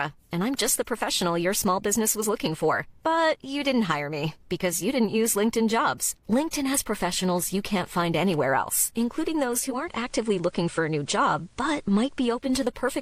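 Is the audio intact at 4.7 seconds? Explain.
Yes, the speech at 4.7 seconds plays through cleanly, with no dropout, click, distortion or other fault at that moment.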